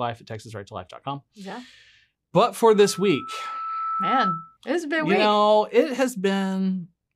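Speech with loudspeaker feedback squeal from 2.74 to 4.57 s, after "but for": a single 1.3 kHz tone swells over about one and a half seconds to roughly speech level, because the microphone re-picks its loudspeaker's output above unity loop gain. It stops before "it's been you week".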